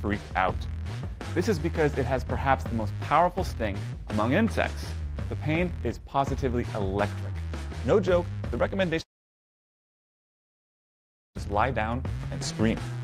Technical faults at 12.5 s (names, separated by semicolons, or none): none